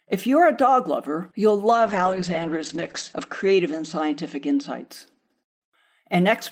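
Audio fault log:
1.72–4.91 s, call bitrate drop: Just after "a dog lover you'll" the speech turns rough and watery, and muffled as the top end falls from 20 kHz to 8 kHz, with the worst stretch lasting 1.32 s before clarity returns. The call's bandwidth estimate fell, so the Opus encoder was told to spend far fewer bits, which fits a fall from 32 kbps to 9 kbps. It coded more coarsely and dropped the high band until the rate recovered.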